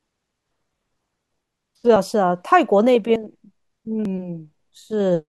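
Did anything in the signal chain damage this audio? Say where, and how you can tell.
Yes. At 0.51, 1.96, 3.16 and 4.05 s the speech jumps ahead with no silence, losing around 40 ms at the first two and about 100 ms at the last two. This is likely a dropped buffer (overrun) at the driver stage: samples were overwritten before being collected.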